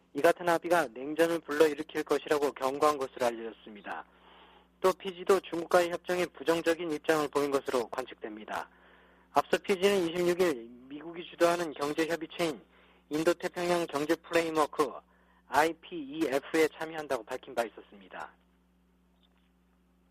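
No technical faults can be heard anywhere in the recording. Nothing in it calls for a fault description.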